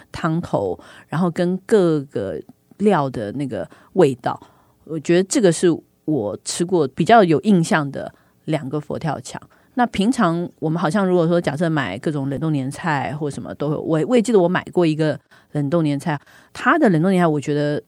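At 12.35 to 12.40 s the speech is broken by a brief glitch of about 50 ms. This is damaged data in the compressed stream: corrupted bytes made the decoder misread those frames and lose sync until it found a valid frame header again.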